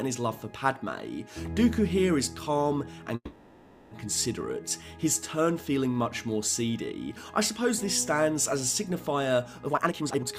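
At 3.15 s the audio stalls for about 0.8 s, the last sound drawn out and fading before it resumes where it left off. That's a call audio freeze, likely from packets held up until the jitter buffer ran dry. From 9.66 to 10.34 s there's a jitter buffer speed-up. Pitch-period slices get trimmed to drain the built-up delay, so the sound rushes along at 178% speed with its pitch unchanged.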